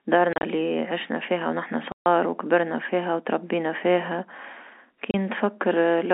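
Packet loss filled with silence hits three times: scattered gaps between 0.33 and 0.43 s, a solid 140 ms hole from 1.92 to 2.06 s, and 30 ms at 5.11 s. Each dropout is a multiple of what sounds like 10 ms packets, with abrupt edges over the narrow telephone-band sound.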